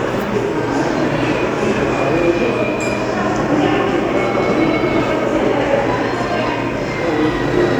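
No technical faults can be heard in this recording of everyday sounds. There is nothing in it to flag.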